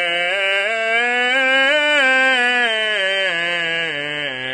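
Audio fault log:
throughout: AAC compression. The music sounds dull, with plainly audible codec damage and nothing above 9.6 kHz. On a spectrogram this shows as a flat ceiling with empty space above it, likely from AAC-LC encoding at a rate that fits 32 kbps.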